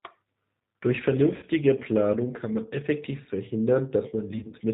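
G.729 coding runs through the whole clip. The speech is rebuilt from a vocal tract filter, a pitch predictor and a few pulses per frame, with nothing above 4 kHz. The result is plainly rough and synthetic, which fits the 8 kbit/s G.729A variant.

VoIP packet loss concealed by the speech codec occurs at 1.36 to 1.48 s and again at 4.39 to 4.56 s. The first is about 60 ms of missing audio. The second is about 80 ms, scattered over 140 ms in runs of up to 40 ms. In both, the decoder extrapolates from its last pitch and filter, so the speech smears into a buzzy tone or a coloured noise that fades, and the following frames stay weak or distorted before recovering.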